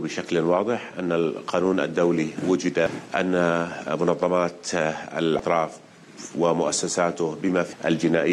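Three quick blips land at 2.86, 5.39 and 7.73 s, each a brief glitch that's gone in a few milliseconds. That's damaged data in a compressed stream: corrupted bytes trip up the decoder, which loses sync and hunts for the next frame header.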